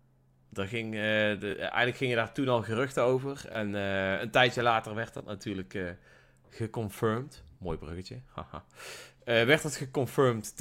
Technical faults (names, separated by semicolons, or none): repeated buffer